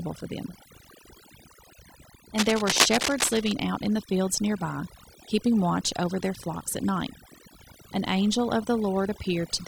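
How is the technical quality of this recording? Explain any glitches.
The recording has two clear technical problems: heavy-handed noise reduction across the whole clip, and a burst of scratching partway through.

Overdone noise removal runs from start to finish. A noise reduction stage set far too aggressively pushes individual frequency bands down or out whenever they sit near its noise estimate, taking quiet parts of the speech with them. The background drops and breaks up into twinkling, warbling specks.

Cable scratch noise appears from 2.38 to 3.52 s. A worn cable, connector or control was likely disturbed, its contact resistance fluctuating rapidly and injecting dense, irregular noise bursts. For just over a second, scratching and rustling sits over the speech at roughly the same loudness as the voice.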